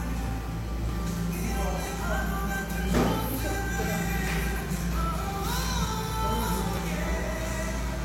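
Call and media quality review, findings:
Audio missing between chunks at 0.89, 1.87, 2.85, 5.79 and 6.77 s: brief skips about a second apart, likely a 1 s chunked recorder losing around 20 ms per boundary.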